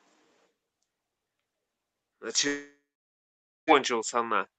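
Speech over a call link, with a likely long network dropout from 2.47 to 3.70 s. The last sound is stretched into a fading buzz, then about 0.87 s of silence, and about 1.2 s of speech is skipped. The skipped stretch and the decaying fill mark it as a dropout, not a brief concealment glitch or a plain pause. The audio is band-limited at 8 kHz, consistent with the call codec.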